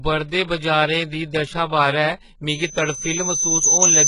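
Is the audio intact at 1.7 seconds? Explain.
No. At 1.7 seconds, as throughout the speech clip, the sound shows heavy damage typical of HE-AAC compression, likely at a very low bitrate around 12 kbps. Only the lower spectrum is truly coded, and the treble is rebuilt by copying lower bands upward, so s sounds come out gritty and metallic. Nothing reaches above 11.1 kHz, yet unlike a plain low-pass the top is still filled in, just synthetic and misaligned with the lower harmonics.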